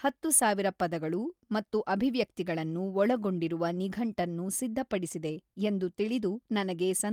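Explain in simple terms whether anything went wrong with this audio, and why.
Nothing stood out as wrong when listening to this speech recording.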